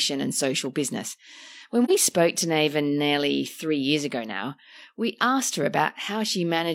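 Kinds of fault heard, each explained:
AAC frame loss with muting: a brief soft-edged dip of about 43 ms at 1.84 s, just before "spoke to", consistent with one lost frame whose spectrum was zeroed.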